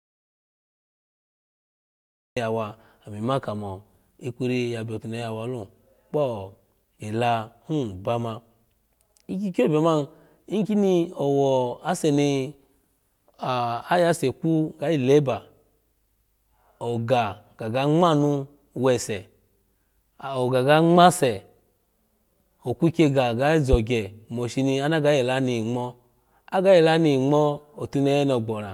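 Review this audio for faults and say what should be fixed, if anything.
The speech opens in an audio dropout to silence: from the very start until 2.37 s there is dead digital silence, with no room tone or background hiss, and the speech arrives already under way. This most likely happened because the input was lost, through a loose connection, a device dropping out or an accidental mute, while the recorder kept writing silence. Whatever was said in those first seconds is gone. To prevent it, secure the input chain and confirm live signal on the meters before starting the recording.

A single loud pop lands between 23.73 and 23.76 s, right after "okwiky ga" and just before "moshino ana ga". It is a sharp click that peaks about 15 dB above the speech, while the speech carries on underneath it. This is likely a voltage transient, from a connector being disturbed, a switch, a static discharge or a driver glitch, that was added straight into the signal path. 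To prevent it, leave cables and switches alone during takes and ground the setup properly.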